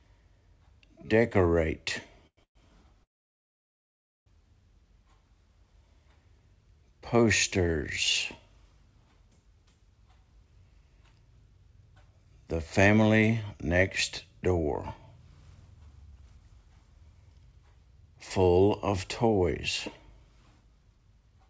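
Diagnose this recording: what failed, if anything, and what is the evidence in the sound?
Packets were likely held up on the network, so the call's jitter buffer ran dry in three call audio freezes: 2.27–2.40 s, 2.43–2.58 s, and 3.03–4.29 s. Each time the receiver stretched the last sound into a brief fading tail, then went silent. The sound later resumes where it stopped, so a gap of 0.1 s, 0.12 s and 1.23 s is inserted.

After the delayed audio arrived, the receiver's jitter buffer held too much and made jitter buffer speed-ups at 10.31–13.22 s, 15.18–19.48 s and 20.01–21.49 s. It cut short pitch-period slices to play 108% fast, trimming roughly 0.3 s, 0.4 s and 0.1 s. Pitch holds but the sound is hurried, within the call path's 8 kHz band limit.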